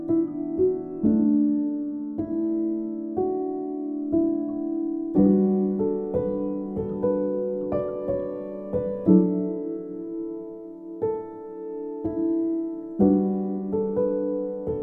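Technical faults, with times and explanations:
No technical faults detected anywhere in the clip.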